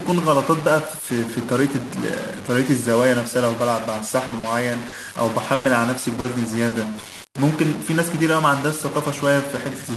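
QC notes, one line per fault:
Throughout: stuck bit. A distortion runs under the speech, and pauses are filled with steady hiss instead of going quiet. The likely cause is one converter bit held fixed. The waveform shows step offsets, and the spectrogram shows broadband grain right across the gaps.
4.27–6.74 s: repeated packet loss (robotic sound). Over this stretch the audio turns choppy, with pieces missing, across six dropouts, the longest about 100 ms, each patched by carrying the last sound forward. On the waveform these are short repeated segments, and on the spectrogram smeared, frozen harmonics.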